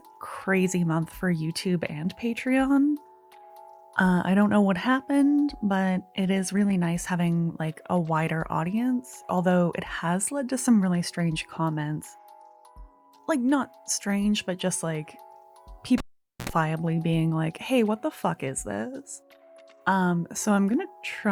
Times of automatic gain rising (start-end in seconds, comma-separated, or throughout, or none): none